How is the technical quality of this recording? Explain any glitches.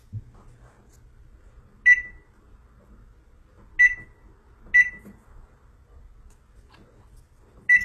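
The recording is clearly compromised by lossy coding throughout. The encoder was most likely HE-AAC at a very low rate, something near 16 kbps. It coded only the lower spectrum and synthesised the treble by copying lower bands upward, so the high end is not genuine, and nothing above 12.3 kHz.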